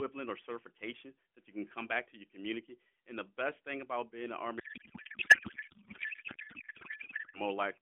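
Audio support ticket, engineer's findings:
Codec payload misread, 4.60–7.41 s, right after "about being in the": speech becomes garbled noise and warble barely tracking it. Probable component: AMR depacketiser. Frames decode as valid but bit fields are misplaced, consistent with octet-aligned payload parsed as bandwidth-efficient. Recovers at 7.41 s.

AMR-NB narrowband path itself: band limited to roughly 300–3400 Hz, light codec coloration, which fits the 12.2 kbps mode.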